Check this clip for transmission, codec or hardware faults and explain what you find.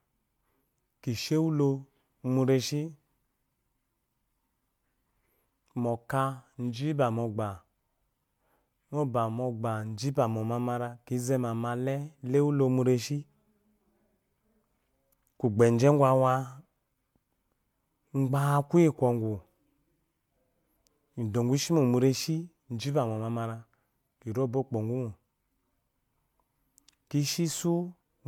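One codec fault runs through the entire speech clip: generation loss. The audio was likely re-encoded about four times with a lossy codec consistent with 128 kbit/s MP3, each pass stacking fresh quantisation noise. The result sounds swirly, hollow and smeared, with blurred attacks, even though content still extends to 20.1 kHz.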